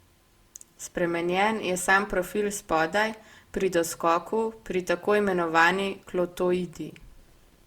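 It's a speech clip with generation loss running the whole way through: the sound is swirly and hollow, consonant attacks are smeared, and the grainy noise floor is worse than a single encode would leave. That's likely from repeated lossy encoding, and the texture fits Opus at around 64 kbit/s put through something like five passes, each one quantising on a shifted frame grid and stacking fresh noise. Content still reaches up to about 20.2 kHz.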